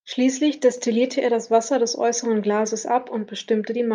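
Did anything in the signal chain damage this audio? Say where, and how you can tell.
Yes. From 0.72 to 0.77 s the speech briefly dips, a sudden drop of about 6 dB lasting 50 ms before the level snaps back. The abrupt step at both edges points to one channel dropping out, likely an intermittent connection in the analogue wiring or a momentary dropout of one side of the stereo path. With one channel gone, the mono sum keeps only half of the material common to both sides, which accounts for the 6 dB fall.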